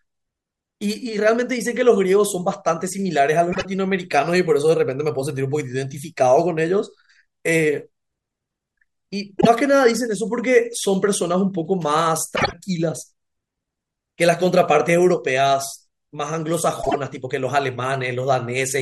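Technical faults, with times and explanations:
3.52–3.65 s, 9.38–9.47 s, 12.36–12.53 s and 16.82–16.95 s, frames out of order: At each spot two neighbouring blocks of audio got decoded in swapped order, so a tiny stretch of speech plays back-half-first. You hear a brief garbled flutter. Three use 24 ms blocks, which points to single frames swapped. The one at 12.36 s uses 48 ms blocks, so it's longer. Nothing goes missing, and the timing stays intact.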